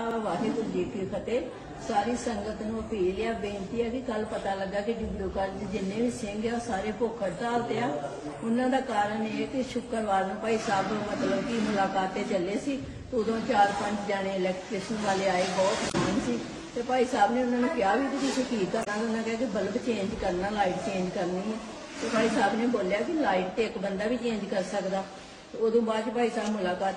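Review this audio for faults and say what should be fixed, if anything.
Damaged data in the compressed stream at 15.87–15.95 s and 18.81–18.88 s. Corrupted bytes made the decoder misread those frames, lose sync and search for the next valid frame header, so each spot becomes a brief chirp or blip lasting roughly 70 to 80 ms. To prevent it, check the file or stream's integrity before decoding and deliver it over a transport with error checking.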